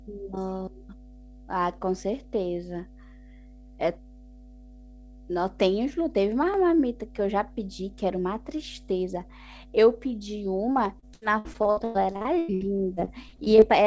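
A steady low drone sits under this speech recording for its whole length. It is mains hum at 50 Hz, roughly 20 dB below the speech, most likely from a ground loop or nearby transformer. From 10.72 to 13.64 s the speech turns choppy and robotic as repeated packet loss punches about twenty holes, the longest 100 ms. Each hole is patched by stretching the previous sound, concealing roughly a quarter of that stretch. Nothing above 8 kHz comes through, which fits a wideband call codec such as G.722.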